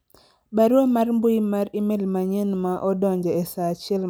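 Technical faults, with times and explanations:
No technical faults are audible anywhere in the speech recording.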